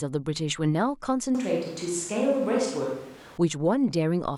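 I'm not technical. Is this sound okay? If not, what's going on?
No. From 1.35 to 3.38 s the speech suddenly turns roomy and hollow, loses some of its low-end body, and picks up more background noise, though loudness stays about the same. This is a switch to a distant microphone, likely because the close microphone's signal dropped out.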